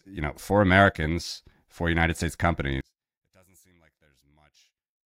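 From 2.81 s right through to the end, the speech drops away by about 35 dB when you fold it to mono, leaving only a faint trace of the centred voice. That's most likely one channel inverted: one side's polarity got flipped, so everything the two channels share cancels on summing. What survives is just the small difference between them.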